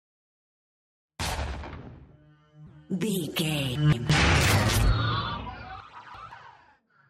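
Two spots of chunks out of order: at 3.76–4.10 s one block arrives a chunk late, and at 5.80–6.32 s another lands two chunks late. Each is a 171 ms slice played after material it should precede, giving a jumbled moment bounded by hard joins.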